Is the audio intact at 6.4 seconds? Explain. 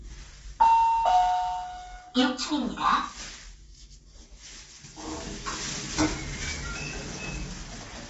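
No, at 6.4 s the sound is grainy and rough, with nothing above 7.8 kHz; this runs throughout and likely comes from low-delay AAC compression at a low bitrate.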